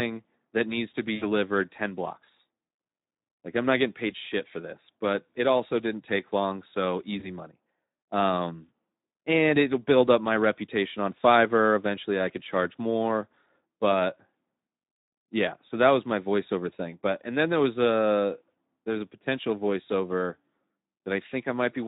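Speex codec damage runs through the whole speech clip and is plainly audible: the voice sounds grainy and noisy rather than clean, which fits a bitrate of about 11 kbps. Speex is a CELP coder that models speech as a filtered excitation signal. When bits are scarce, that excitation is only roughly coded, so the voice takes on a coarse, synthetic texture instead of its natural detail.

VoIP packet loss concealed by the speech codec occurs twice. From 1.15 to 1.25 s, between "that needs to be" and "ten blocks", about 60 ms of audio goes missing, which fits three lost frames. At 7.19 to 7.29 s, just after "didn't take long so", a shorter gap of about 20 ms fits one lost frame. Each time, the decoder extends its last pitch and filter state with falling gain, smearing the sound into a fading buzz or coloured noise. Because each frame builds on the previous one, the voice stays weak or distorted briefly after packets resume.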